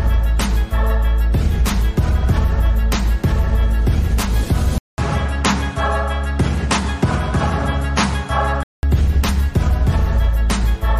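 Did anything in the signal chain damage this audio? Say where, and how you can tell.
Yes. From 4.78 to 8.83 s the input likely switched to a poorer device at the driver level: a 200 ms silence at the switch, then nothing above 11.3 kHz, a level drop of roughly 5 dB and a new noise floor around 40 dB down, so the sound turns dull.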